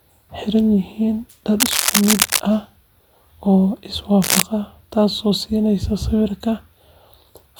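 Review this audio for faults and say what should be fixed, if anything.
Cable scratch noise at 1.60–2.40 s and 4.21–4.42 s: dense, uneven rustling bursts roughly as loud as the speech, unlike isolated clicks or steady hiss, likely from a worn, moving connection. Replace or reseat worn cables and connectors, and secure them so they cannot move during recording.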